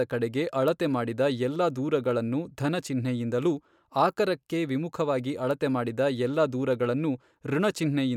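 No technical faults can be heard anywhere in this speech clip. There is nothing to place in time order.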